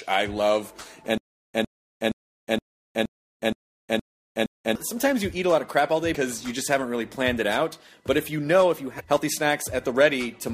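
From 1.18 s to 4.75 s there is a stutter with silent gaps: a 104 ms fragment plays, then about 366 ms of dead digital silence, and the same burst returns every 470 ms, nine times in all. That fixed repeat of one identical slice, with true silence between, sets it apart from ordinary dropouts, which lose different audio each time. The likely cause is a stalled stream that replayed its last fragment on each retry while the intervening audio was lost.

At 4.46 s, inside the stutter, and again from 8.99 to 9.01 s, there is damaged data in the compressed stream: a chirp, squawk, click or short hole as the decoder misreads corrupt frames and resynchronises at the next valid header. Unlike the stutter, these are one-off, non-repeating blips.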